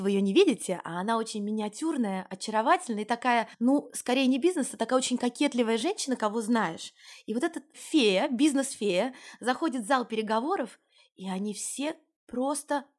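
No technical faults can be heard anywhere in the recording, and the signal stays steady and intact throughout.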